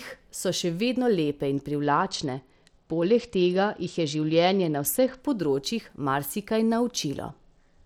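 Bluetooth SBC bit pool drops hit this speech clip from 1.83 to 5.2 s and again from 7.3 s to the end. In both stretches the treble turns dull and a gritty noise rises, which fits the sender cutting the SBC bit pool from 31 to about 10, near 77 kbps. With so few bits, the highest sub-bands get little or nothing and the rest are coarsely quantised until the link recovers.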